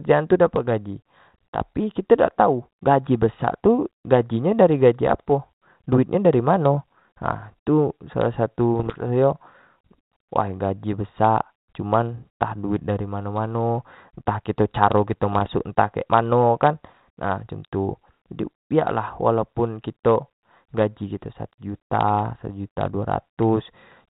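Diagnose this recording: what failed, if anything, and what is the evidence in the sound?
Bit errors on the ADPCM link, apparently a 32 kbit/s G.726 path limited to 4 kHz. Pops and rough bursts with brief level jumps occur at 5.07–5.20 s, 8.79–9.02 s and 15.32–15.50 s. Each flipped bit, a few per thousand, upsets the decoder's step size and predictor, so the damage rings on.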